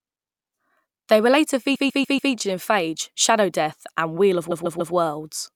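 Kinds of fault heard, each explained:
Repeated frames, at 1.74 to 2.32 s and 4.50 to 4.93 s: a short block of compressed frames was delivered more than once, so the decoder plays the same 144 ms slice of speech back to back, which fits a run of several codec frames. The first spot stutters through four extra plays, adding 0.58 s. The second gives three extra plays, adding 0.43 s and stretching the clip by that much.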